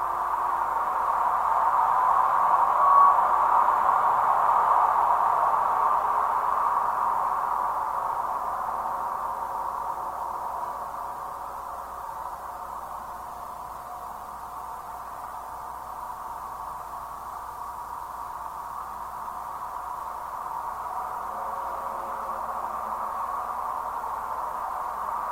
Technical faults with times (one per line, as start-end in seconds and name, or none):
10.84-15.87 call bitrate drop